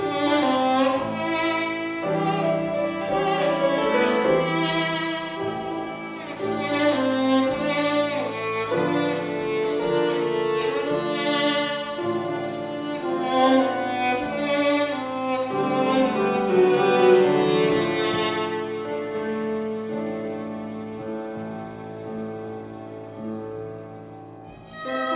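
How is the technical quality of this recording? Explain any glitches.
No glitches can be heard anywhere in the recording. There is nothing in the audio that calls for an explanation.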